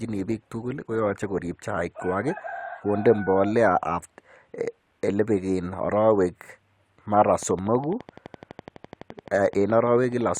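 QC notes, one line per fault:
0.00–2.00 s, adaptive stream starting at a low bitrate: the player opened on a cheap, low-rate version of the stream, consistent with roughly 24 kbit/s Opus, before stepping up to around 64 kbit/s. Until that switch the speech sounds duller with stronger codec smearing, and then quality jumps with no gap.
7.43–10.38 s, train of clicks: a regular ticking of about 11.9 pulses per second, about forty in all, each reaching roughly the level of the speech itself. The near-identical shape and steady pace point to likely electrical interference or a faulty connection injecting pulses.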